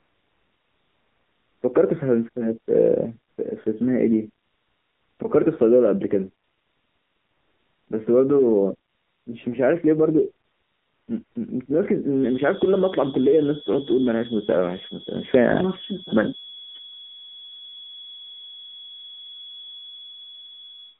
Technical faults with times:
0.00-20.99 AMR narrowband mobile codec
0.00-1.62 AMR comfort noise
3.32-3.38 AMR comfort noise
4.44-5.20 AMR comfort noise
6.44-7.88 AMR comfort noise
8.90-9.26 AMR comfort noise
10.46-11.36 AMR comfort noise
12.11-20.99 feedback whistle

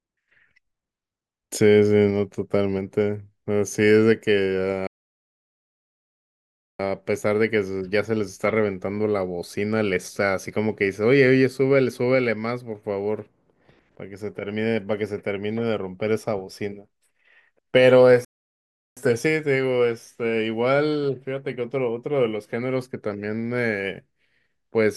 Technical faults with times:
4.87-6.80 playback stall
18.25-18.97 playback stall

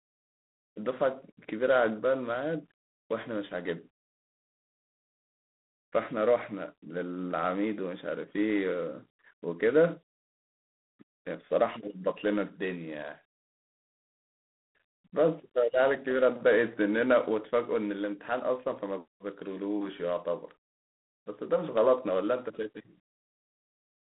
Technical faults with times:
0.00-24.15 G.726 ADPCM

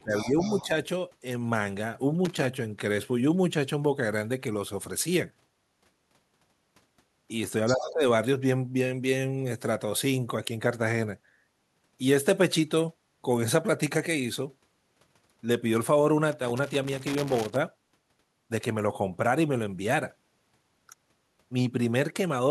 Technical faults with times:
0.00-0.72 speech suppressed in double talk
0.16-0.66 other side's voice leaking through
2.25-2.54 loose connector crackle
7.66-7.75 other side's voice leaking through
7.73-8.02 speech suppressed in double talk
16.32-17.56 loose connector crackle

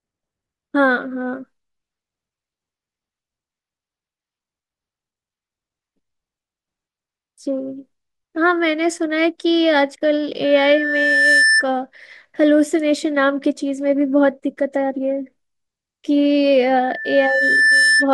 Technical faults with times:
10.44-11.65 loudspeaker feedback squeal
16.77-18.08 loudspeaker feedback squeal

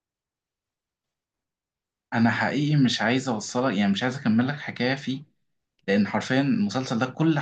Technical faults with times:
none

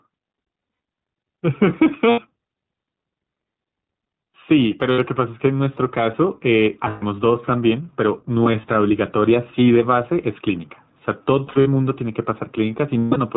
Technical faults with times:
0.00-13.37 gain pumping
0.00-13.37 iLBC codec
0.59-0.80 lost iLBC frames
2.10-2.20 lost iLBC frames
4.92-5.00 lost iLBC frames
6.88-7.04 lost iLBC frames
8.44-8.65 lost iLBC frames
11.46-11.68 lost iLBC frames
12.98-13.18 lost iLBC frames

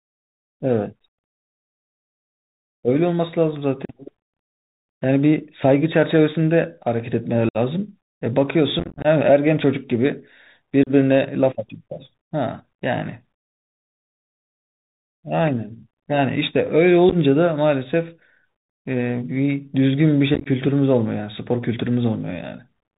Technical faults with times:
0.00-22.99 Bluetooth CVSD headset codec
3.85-3.94 unconcealed Bluetooth headset packet loss
7.49-7.57 unconcealed Bluetooth headset packet loss
8.79-9.06 unconcealed Bluetooth headset packet loss
10.83-10.91 unconcealed Bluetooth headset packet loss
17.09-17.16 unconcealed Bluetooth headset packet loss
20.34-20.47 unconcealed Bluetooth headset packet loss

